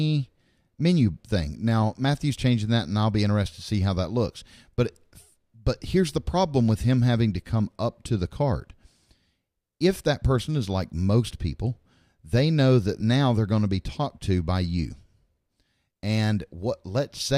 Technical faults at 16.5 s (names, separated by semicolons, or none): none